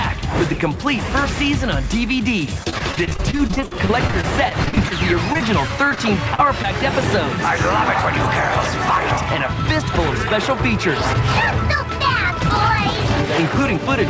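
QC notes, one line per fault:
2.64–6.65 s, repeated packet loss (robotic sound): Dozens of short dropouts follow one another, the longest 46 ms. Each hole is patched by stretching the preceding sound. About 17% of the stretch is concealed, so the audio turns choppy and robotic, with pieces missing.
12.31–13.79 s, jitter buffer speed-up: The receiver trimmed tiny pitch-period slices repeatedly to drain excess buffered audio, roughly 70 ms in all. Playback runs at 104% with pitch unchanged. The call path cuts everything above 8 kHz here too.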